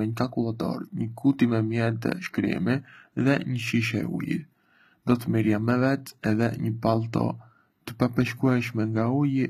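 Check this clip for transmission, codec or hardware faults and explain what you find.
One codec fault runs through the whole speech clip: HE-AAC compression damage, plainly audible from start to finish. The likely cause is low-rate HE-AAC v2 coding, consistent with roughly 20 kbps; only the lower band is coded, and the treble is rebuilt from copied lower bands. Sibilants sound gritty and lispy. A spectrogram shows repeated, mismatched harmonic patterns above the crossover and nothing above 14.9 kHz.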